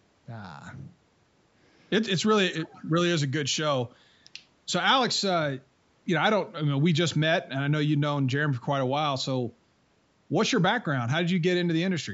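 Speech carried through a call's microphone processing, with the lowest bass trimmed by its high-pass filter and nothing above 8 kHz, and no technical faults are audible anywhere in it.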